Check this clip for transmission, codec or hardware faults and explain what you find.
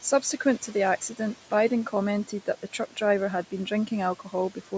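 Two faults come from the call's noise suppression rather than from transmission, codec or hardware.

Noise suppressor artifacts run through the whole clip. The suppressor treats steady room noise, sitting about 20 dB under the speech, as something to remove, and pulls it down by about 12 dB frame by frame. The background dips in the gaps and swells back under speech. Unlike packet loss, nothing drops out abruptly and there are no clicks or repeats.

Speech cut by the noise suppressor occurs between 2.25 and 2.98 s. The suppressor mistakes quiet parts of the speech for noise and turns them down by up to about 12 dB, over roughly 150 ms in total. Those soft sounds come out swallowed and faint. A dropout would leave silence or a glitch instead. The loss of content above 8 kHz comes from the call's microphone processing.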